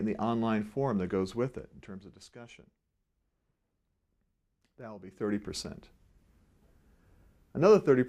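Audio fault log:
4.98 to 5.39 s, zipper noise: The level shifts by roughly 15 dB over about 0.4 s. It does not glide. It moves in discrete jumps, about a hundred a second, with no smoothing between them. Each jump puts a tiny step into the waveform, and each step clicks. Packed this closely, the clicks merge into a buzzy zipping texture that rides on the sound until the move ends.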